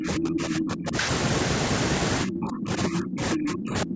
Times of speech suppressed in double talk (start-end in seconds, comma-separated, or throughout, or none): 0.00-0.95, 2.24-3.95